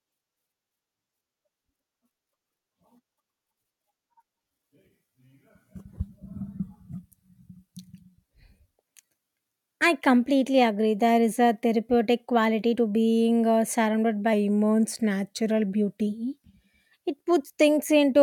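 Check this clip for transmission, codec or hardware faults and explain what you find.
Two short stretches of the speech run slow and flat: 6.61 to 8.35 s, and 14.33 to 16.07 s right after "being uh surrounded by". Each is a drift correction step, likely from clock-matching software that briefly cut the playback rate by about 5.5% to manage its buffer. Speed and pitch drop together, about a semitone down, then snap back.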